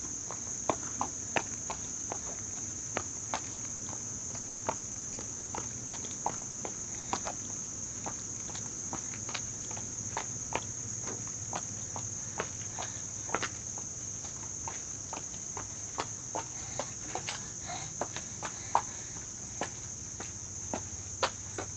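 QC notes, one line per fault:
3.53–3.59 s, 3.75–3.81 s and 7.01–7.05 s: short concealed packet loss. About 40 ms, 40 ms and 20 ms of audio arrived too late. The receiver extended the preceding sound to fill each hole, then blended back. Each one is heard as a brief smear or wobble.
4.41–5.49 s and 5.87–6.55 s: repeated packet loss (robotic sound). The first stretch has eight gaps totalling 300 ms, about 28% of it, the longest 120 ms. The second has four gaps totalling 140 ms, about 21%, the longest 60 ms. Patch follows patch, so the sound turns choppy, with pieces missing.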